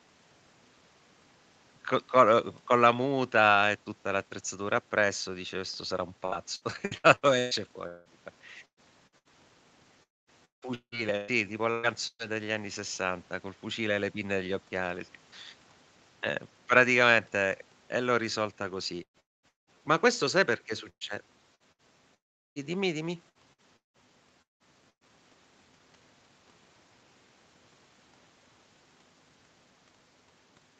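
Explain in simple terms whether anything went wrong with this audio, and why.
Two kinds of trouble are audible. From 6.25 to 12.22 s and again from 19.03 to 25.09 s there is repeated packet loss (robotic sound): small chunks of the speech keep going missing, up to about 0.18 s each, and the gaps are patched by stretching the previous sound, giving a choppy, metallic quality.

At 10.03 to 10.30 s, 19.20 to 19.46 s and 22.14 to 22.59 s the speech cuts out completely, leaving a brief fading buzz and then near-silence before it resumes with that part lost. These are likely long network dropouts, where no audio arrived for a quarter to nearly half a second.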